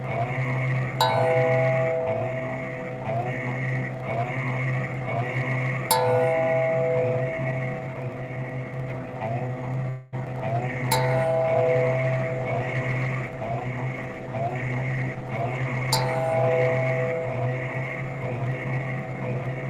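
At 9.89 s the sound stops moving forward and the last moment gets stretched into a fading tail of buzz or hiss that lasts until 10.15 s, about 230 ms in all. That's a call audio freeze. The likely cause is packets being held up in transit so the jitter buffer ran dry and the receiver kept extending what it last had. When data arrived, playback picked up exactly where it left off, so nothing was lost. Everything after that point now runs about a quarter second later.

Right after, from 10.25 to 10.27 s, there's a tiny smear or wobble. That's short concealed packet loss. About 20 ms of audio never made it to the decoder in time, and the receiver covered the hole by briefly continuing the previous sound before blending back into the real signal.

From 10.58 s to the end, the sound goes rougher and duller. That's a call bitrate drop. The bandwidth estimate fell and the encoder went from 64 kbps down to 20 kbps, sitting at its lowest for roughly 5.9 s. 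At that rate Opus codes coarsely and trims the top end, so you get that watery, muffled quality with the brightness missing.

Layered on top of that, between 13.75 and 14.98 s, things run slightly hurried, about 106% speed with no change in pitch. That's a jitter buffer speed-up. The buffer was holding more audio than it wanted, probably from delayed packets landing together. To pull the delay back down, the receiver snipped out short pitch-period chunks over and over, trimming about a tenth of a second in total.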